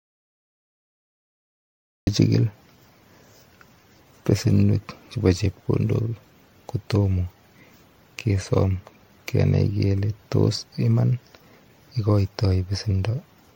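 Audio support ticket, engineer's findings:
Dead silence from the start to 2.07 s, no room tone; audio dropout to silence, likely lost input upstream with the encoder writing silence.

Swirly, hollow, smeared speech throughout, blurred onsets, nothing above 16.5 kHz; generation loss, likely around seven MP3 re-encodes at 64 kbit/s compounding quantisation noise.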